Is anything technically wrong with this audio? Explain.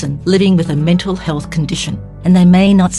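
No, the signal shows no technical faults at any point.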